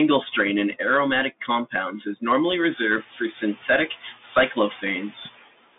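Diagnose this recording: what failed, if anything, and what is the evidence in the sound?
Call processing failed: noise suppressor artifacts. After the room noise rises around two and a half seconds, ending about 18 dB below the speech, it dips by about 14 dB between phrases and swells under them. On a spectrogram the noise floor blinks frame by frame.

The codec stage shows a Bluetooth CVSD headset codec. The spectrogram cuts off flatly at 3.8 kHz, and the usable band sits at 200 Hz to 3.6 kHz. Sibilants sound scratchy, with granular hiss beneath, as the one-bit delta coder's adaptive step lags loud high content, which fits a 64 kbps CVSD stream.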